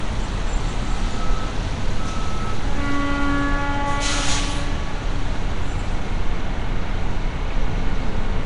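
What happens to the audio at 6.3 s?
At 6.3 s you're hearing the same damage that runs through the whole clip: a rough, hissy fuzz around the sound, a smeared, underwater softness, and nothing at all above about 10.6 kHz. That's most likely Nellymoser compression, the old Flash codec, which works in short blocks at a fixed, very low bit budget and fills the quieter bands with noise instead of real detail. The character fits a rate of around 44 kbps.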